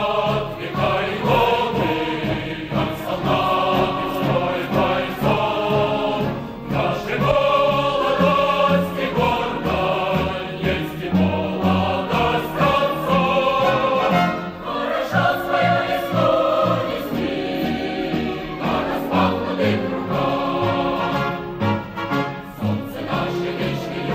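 From 1.08 to 5.32 s, a doubled audio track appears. A full-band copy trails about half a second behind, roughly 5 dB quieter, likely from a second, slower capture path.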